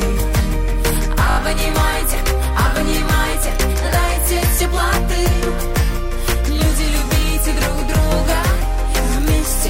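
A repeated buffer runs from 1.30 to 1.38 s. Fresh audio failed to arrive in time, so the same 20 ms piece played four extra times, each repeat joined abruptly. It sounds like a brief buzzy stutter, with essentially nothing missing afterward.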